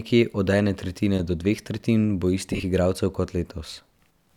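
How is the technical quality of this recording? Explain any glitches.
There's one glitch. From 2.53 to 2.63 s, lost LE Audio frames (around 80 ms gone, longest gap roughly 40 ms) get patched with a reused, sign-scrambled spectrum, so the speech briefly smears into noise.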